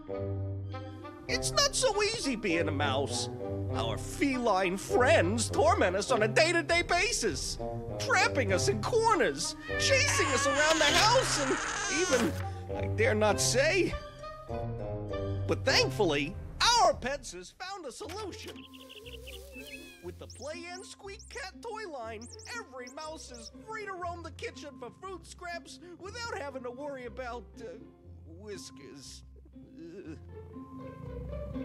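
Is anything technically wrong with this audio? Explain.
Yes. From 16.84 to 17.5 s a fast ticking rides on a drop of around 15 dB. This is zipper noise: the gain falls in unsmoothed steps, about fifty per second.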